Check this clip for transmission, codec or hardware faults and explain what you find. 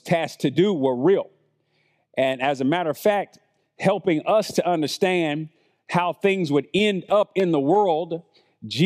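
Listening through the speech, nothing stood out as a fault.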